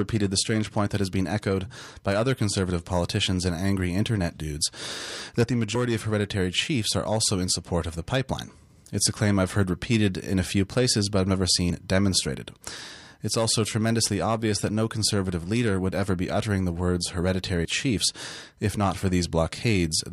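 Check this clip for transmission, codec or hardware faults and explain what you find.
One fault here: audio missing between chunks. At 17.65 s, right before "chiefs if not", about 50 ms drops out and the sides butt together, likely where 6 s processing chunks meet.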